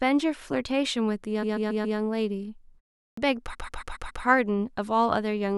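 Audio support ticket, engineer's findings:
Repeated frames: a compressed block of about 139 ms, which fits six frames, was sent or written more than once. The decoder replays it, so the speech stutters. At 1.42–1.98 s it plays 4 extra times, adding 0.56 s. At 3.53–4.23 s it plays 5 extra times, adding 0.70 s.

Clipped start after a pause: the output device drops to sleep during the 0.37 s gap and is slow to wake. The first 84 ms of the next sound is lost at 3.09–3.17 s, so speech starts abruptly without its onset.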